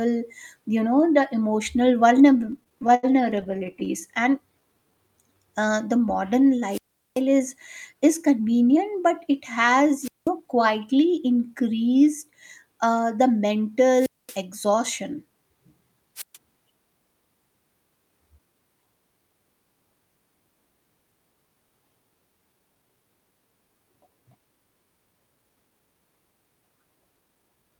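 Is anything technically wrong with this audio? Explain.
Yes, the audio has four kinds of fault.

Repeated stalls (stutter) run from 2.33 to 3.88 s. Audio reached the receiver late or too slowly, so its jitter buffer kept emptying, and each time it stretched out the last sound until more arrived. That happens a couple of dozen times here. The gaps last up to 81 ms and add 331 ms in all, about a fifth of that span, so the speech drags and stutters but nothing is lost.

A jitter buffer slow-down runs from 4.60 to 5.35 s, ending just before "uh the modern". The buffer needed more reserve, so the receiver repeated single pitch cycles and slivers of pauses over and over. That adds 109 ms and slows the speech to 86% of its normal rate without changing the pitch. The sounds come out drawn-out.

Wireless microphone squelch dropouts occur at 6.70 to 7.21 s, 10.02 to 10.29 s (just after "but it has"), 13.93 to 14.38 s and 16.16 to 16.37 s. 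Each time the radio signal from the FM microphone faded far enough that the receiver's squelch cut the output. You hear a rise of hiss or static, then a near-silent hole of 389, 191, 229 and 129 ms respectively, then the speech returns.

Jitter buffer speed-ups occur at 7.32 to 8.77 s, leading into "but it has", and at 27.21 to 27.79 s. The buffer held more audio than its target, so the receiver repeatedly cut out short pieces one or a few pitch cycles long, about a tenth of a second in each span. The speech runs at 106% and then 116% of normal speed at unchanged pitch, so the second span sounds noticeably hurried.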